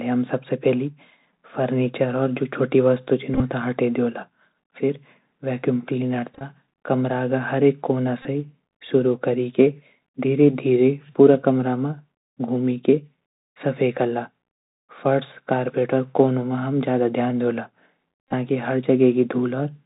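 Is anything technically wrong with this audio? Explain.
Yes. The whole clip of speech passes through the Bluetooth CVSD headset codec. Its one-bit, 64 kbps delta coding cuts everything above 4 kHz and cannot track fast, loud high sounds. The result is plainly audible: muffled, narrowband speech, scratchy sibilants, and a granular hiss underneath.

Bluetooth headset packet repeated faults occur at 3.34–3.42 s (just before "हटै दियोला"), 6.35–6.43 s (between "वैक्यूम क्लीनर" and "कमरा का"), 8.22–8.26 s and 18.29–18.34 s. Voice packets were lost and the chip re-decoded the previous one, about 26 to 41 ms of lost audio each time. Runs of up to roughly 20 ms repeat every 3.75 ms, producing a brief buzz near 267 Hz. Isolated repeats come through as small ticks.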